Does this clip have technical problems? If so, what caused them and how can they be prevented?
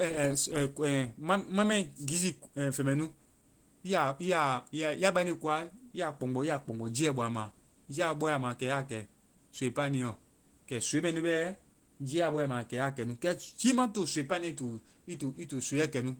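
Yes. Throughout the speech there is audible Opus compression damage, likely from a low-bitrate encode near 16 kbps in hybrid mode, which adds a hoarse, muffled, grainy texture, with content still reaching 20.1 kHz. Prevent it by encoding at a higher bitrate.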